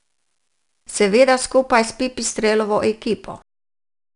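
A speech recording carrying 4-bit ADPCM compression damage from start to finish. Each sample is coded as a coarse 4-bit step from a predicted value, so a gritty, clearly audible hiss rides on every louder syllable and roughens sharp onsets. Nothing is present above 10.6 kHz, which points to a low sample rate and a data rate around 88 kbps. On a spectrogram, broadband noise rises and falls with the speech level beneath a hard ceiling at 10.6 kHz.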